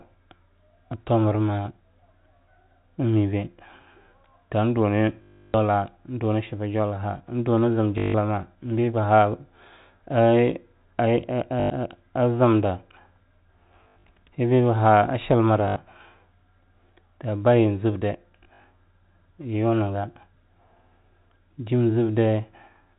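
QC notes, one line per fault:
5.22–5.54, 7.98–8.14, 11.6–11.7, 13.84–14.04 (just before "beba ha a chilmra"), 15.68–15.76 (just after "beba ha a chilmra"), 18.44–18.64 s: packet loss with last packet repeated. Each gap is filled by replaying the last packet, so the longest, at 320 ms, buzzes at 50 Hz, which fits 20 ms packets. 13.84 and 18.44 are scattered, stuttering losses. Unlike a silent dropout or smooth concealment, the runs give a robotic stutter, heard over the 4 kHz telephone band.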